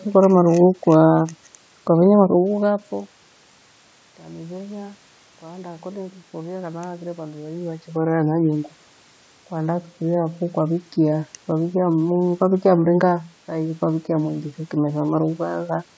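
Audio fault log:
0.18 to 15.78 s, clock slip clicks: faint regular ticks roughly every 0.3 s, around fifty in all, each a single sample dropped or repeated. The likely cause is two unsynchronised clocks drifting apart by around 200 ppm, slipping one sample whenever the gap reaches a whole sample.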